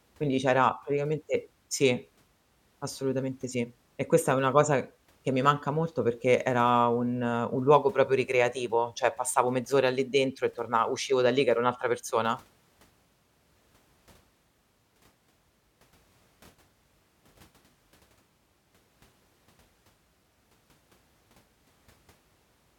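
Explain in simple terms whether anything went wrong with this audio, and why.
Listening to the recording, nothing stood out as having gone wrong at any point in the speech.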